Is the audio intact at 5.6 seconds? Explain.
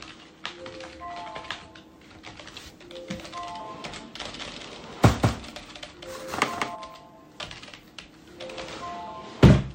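No. From 4.26 to 6.75 s the sound is likely being captured a second time through a slower path, so a doubled audio track sits under it: a full-band copy, about 5 dB quieter, trailing by around 200 ms with no room colour, giving a hard, flat echo.

At 5.56 to 5.60 s, an overlap between stream segments makes the player discard about 37 ms it wrongly treats as duplicated, with 2-second segments. The waveform jumps there, heard as a small skip.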